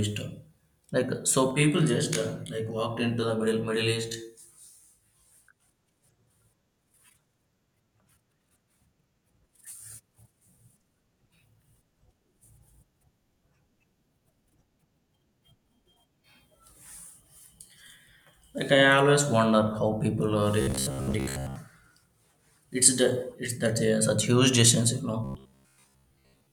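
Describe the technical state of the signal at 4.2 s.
At 4.2 s the speech sits inside a stretch of channel delay (comb filtering) running from 1.51 to 5.69 s. One channel lags the other by roughly 20 ms, and summing them to mono cancels shared content at evenly spaced frequencies, starting low, near 30 Hz. The result is a rough, slightly doubled tone. Unlike an echo, the late copy fuses rather than repeating audibly, and unlike flanging, the notches stay fixed instead of sweeping.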